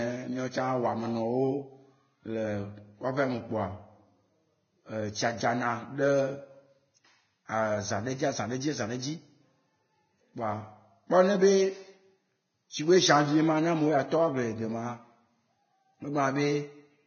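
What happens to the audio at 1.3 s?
At 1.3 s the speech sounds hissy and grainy, as it does throughout. Nothing is left above 6.6 kHz. The treble is replaced by rough noise of similar energy, and attacks are blurred. The likely cause is heavy Vorbis compression, which fits a bitrate near 17.5 kbps.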